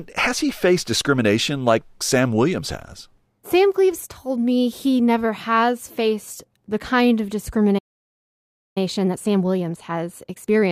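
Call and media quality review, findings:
Playback stall, 7.78 to 8.78 s: speech cuts off mid-flow into clean silence for just under a second, then resumes. Likely cause: player buffer underrun or blocked output thread. Unlike network packet loss, the gap has no concealment noise, no clipped fragments, and no repeated syllables. It is one dead stretch ending at a clean restart.

Time-compressed catch-up, 8.78 s to end of clip: speech runs hurried at about 1.25x with pitch unchanged. The player drains its backlog after the stall by cutting short segments and cross-fading the joins. Unlike a resampling or clock-rate error, the voice does not rise in pitch, and the rush starts right where the silence ends.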